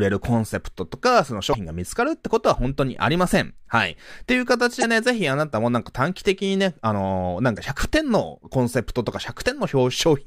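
At 1.50 to 1.55 s, 4.80 to 4.84 s and 7.54 to 7.58 s the speech gets a short glitch, each about 45 ms long. That's damaged data in a compressed stream: the decoder hits corrupted bytes, loses frame sync and hunts for the next good header.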